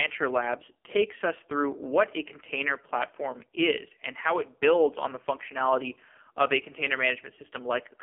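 From the start, the speech has passed through an AMR narrowband mobile codec, which squeezes the voice into a telephone band of about 250 Hz to 3.4 kHz, with nothing above 3.4 kHz. The damage is heavy: the voice sounds buzzy and synthetic because the codec rebuilds it from a vocal-tract model and a sparse pulse excitation, and the coarseness fits one of the lowest AMR-NB modes, around 5.9 kbps.

At 4.89 s, just after "is and how it", mains hum comes in and runs until 7.82 s. It is a steady low 50 Hz tone, the kind produced when the power line couples into the signal through a ground loop or a nearby transformer. The hum sits roughly 20 dB below the speech, and it stops before the clip ends.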